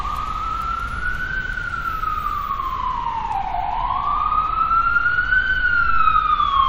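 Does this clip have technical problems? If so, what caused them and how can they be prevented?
Yes. At 3.34 to 3.36 s there is a brief glitch from damaged data in a compressed stream: corrupted bytes made the decoder misread frames and resync at the next header. Checksummed, reliable transfer and storage prevent it.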